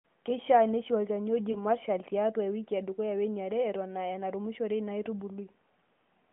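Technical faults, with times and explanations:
1.52 to 1.62 s, lost AMR speech frames: just after "neishi olchani oji" and before "marshal tiaatu ewiki edukuya", a single 20 ms frame is corrupted by radio errors and fails its checksum, and the decoder fills the gap by repeating the previous pitch and vocal tract settings at reduced gain. The result is a brief dip or warble. On the waveform it appears as a short sag in amplitude. On the spectrogram the harmonics briefly smear and fade inside the 200 to 3400 Hz band of the 12.2 kbps AMR-NB line, then recover somewhat weakly.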